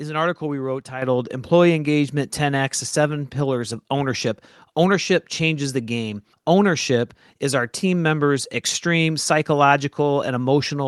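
At 1.02 s, right after "an article we wrote", the microphone volume is stepped up: the call software judged the input too quiet and raised the device gain in one jump of about 8 dB. Because the change happens at the capture device, the speech and the background noise get louder together, producing an abrupt level step rather than a gradual rise. The audio arrives through the WebRTC call path, band-limited to about 12 kHz.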